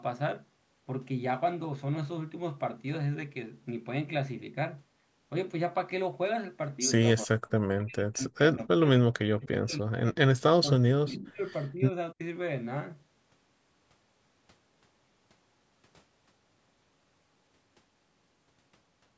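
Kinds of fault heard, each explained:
Speech suppressed in double talk: the speech drops out in pieces at 7.23–8.6 s, 8.77–8.85 s, 9.14–10.17 s, 10.49–11.43 s, 11.7–11.85 s and 12.13–12.2 s. Most gaps fall by about 40 dB, near silence, while the 11.7 s one dips only about 10 dB. The likely cause is an echo canceller that, with both ends talking at once, could not tell this talker from loudspeaker echo and attenuated both.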